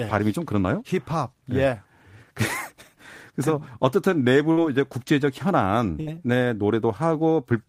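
At 4.51 s and again at 6.01 s, a burst of packet loss: roughly 60 ms goes missing each time. The receiver stretches the last sound into a fading buzz or hiss, visible as smeared, decaying spectrogram bands before audio resumes abruptly.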